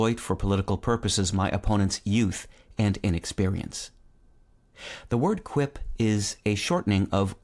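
No audible technical faults anywhere in this speech recording.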